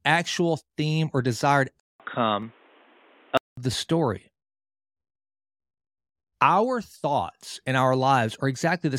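A likely input switch to a poorer device interrupts this speech recording from 1.80 to 3.57 s. About 200 ms of silence marks the changeover, and the sound that follows turns dull and boxy, with a narrower band, a level shift of roughly 5 dB and a faint new background noise well below the speech. At 3.57 s the full bandwidth returns as the original input takes over again.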